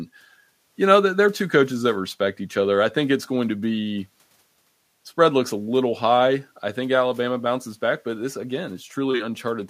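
No technical faults can be heard anywhere here.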